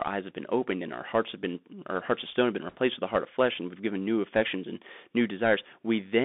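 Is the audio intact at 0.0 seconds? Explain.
No. Right from 0.0 s and across the whole clip the speech sounds thin, hissy and grainy, with scratchy s sounds and plainly audible codec damage. That is the Bluetooth CVSD headset codec, passing roughly 200 Hz to 3.6 kHz. It encodes one up-or-down bit per sample, which fits a 64 kbps stream, and its adaptive step cannot keep up with loud high-frequency sound.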